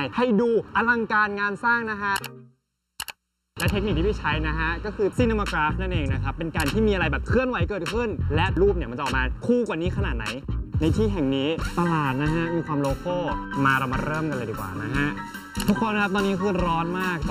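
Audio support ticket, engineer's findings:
Hollow, phasey tone across the whole clip. Channel delay (comb filtering): one side runs late by roughly 0.7 ms, and the mono sum cancels into fixed notches starting around 700 Hz and repeating about every 1.4 kHz. Check the channel alignment.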